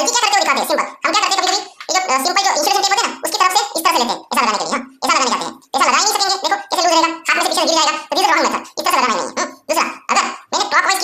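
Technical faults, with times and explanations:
Throughout: audio read two samples at a time (double speed). The playback side is treating each pair of consecutive samples as a single frame, most likely because it assumes two interleaved channels or a sample width twice the real one. As a result the material runs at 2x speed and sits 12 semitones, a full octave, above where it belongs.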